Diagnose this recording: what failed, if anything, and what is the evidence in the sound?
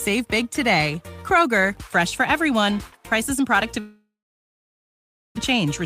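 The network stage likely suffered a long dropout, with packets ceasing to arrive for well over a second. From 3.79 s the last sound is stretched into a fading buzz that dies away, leaving silence for about 1.24 s of the gap. Audio resumes at 5.39 s, but roughly 920 ms of material is simply gone, and the stream comes back shifted by something like 0.7 s as the receiver's jitter buffer resynchronises.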